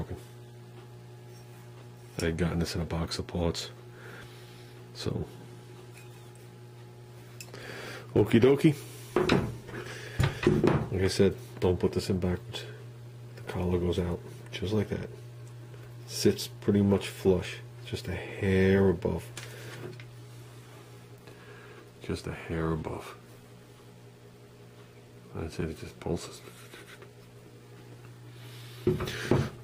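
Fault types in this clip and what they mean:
Nothing stood out on listening; no faults were heard anywhere in the audio.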